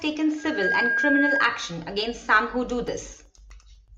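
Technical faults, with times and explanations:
0.38–1.65 s, loudspeaker feedback squeal: the microphone picked up its own loudspeaker and loop gain exceeded one at 1.6 kHz, so a tone swells over roughly 0.3 s to about 5 dB above the speech, stopping just before "against some who do".
2.88–3.88 s, periodic USB or driver dropouts: the audio path stalled every 0.125 s, replacing roughly half a millisecond with silence each time, heard as about ten evenly spaced ticks after "against some who do".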